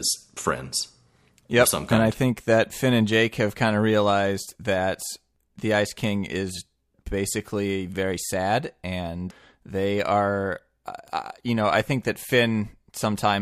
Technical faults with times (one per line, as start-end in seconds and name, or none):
11.08 bit error spike